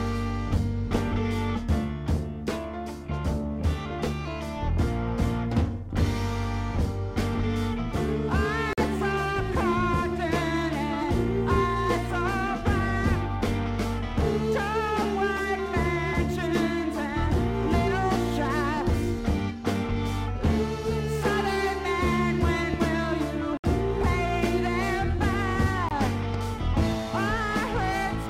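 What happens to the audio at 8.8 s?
The program likely failed to deliver a buffer in time, so a block of samples was written out as zeros, a block of digital silence from 8.73 to 8.78 s. The 46 ms gap fits one 2048-sample buffer at 44.1 kHz. The audio stops dead and resumes with no fade, and in between the sound drops out briefly, heard as a short hole.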